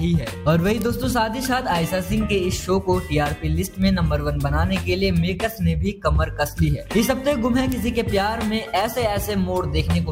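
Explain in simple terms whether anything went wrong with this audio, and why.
Four sharp, isolated ticks stand out, at 0.82, 2.98, 3.82 and 7.72 seconds, each unrelated to the sound around it. These are bit error spikes: a flipped digital bit briefly threw one to three samples far off their proper value before they snapped straight back.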